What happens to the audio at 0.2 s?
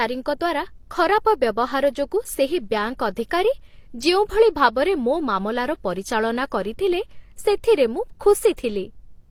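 At 0.2 s the speech carries the layered artefacts of transcoding between lossy codecs, present through the whole clip. It was likely coded twice, fitting HE-AAC at low bitrate and then Opus. The second coder preserves the first one's artefacts and adds its own. Nothing sounds above 20.1 kHz.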